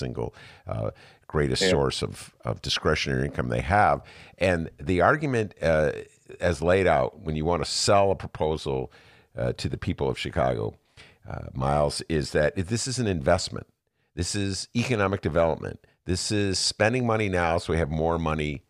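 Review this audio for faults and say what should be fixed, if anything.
Nothing stood out on listening to the recording, so there is nothing here to fix.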